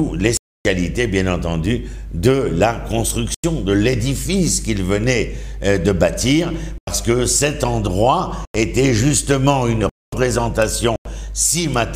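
The audio drops to digital silence six times: 0.37–0.65 s (about 279 ms), 3.34–3.44 s, 6.78–6.87 s, 8.45–8.55 s, 9.89–10.12 s (about 230 ms), and 10.96–11.05 s. Four gaps are identical at about 93 ms, which fits a 4096-sample buffer going unfilled in time. Each gap is a block of digital silence, cutting out and back with no fade. A masked or concealed dropout would leave residual noise or a smoothed transition instead.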